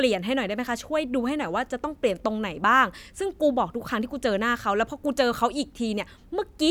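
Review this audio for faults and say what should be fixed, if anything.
Nothing in this speech recording needs fixing, as no faults can be heard. There is nothing to correct and no preventive step to recommend.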